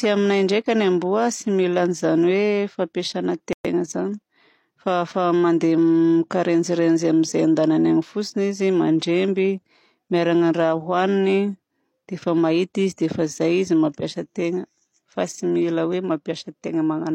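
At 3.53 s the speech stops dead for about 119 ms and resumes at 3.65 s: a gap at a join of encoded pieces. Two separately encoded segments were joined without trimming, so the first segment's padded final frame and the second encoder's startup silence both remain. Unlike a dropout, nothing is missing. The speech picks up exactly where it halted, and the codec smears the edges of the silence, so the truly silent part is a little shorter.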